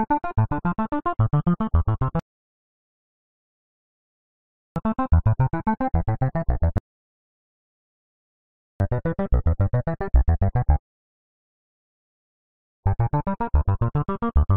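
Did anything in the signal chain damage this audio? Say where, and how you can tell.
Yes: rebuffering stalls, at playback. The sound drops to silence at 2.20–4.76 s, 6.78–8.80 s and 10.80–12.83 s, then resumes exactly where it stopped. Nothing is lost. Each stall adds 2.0–2.6 s while the player waits for more downloaded audio.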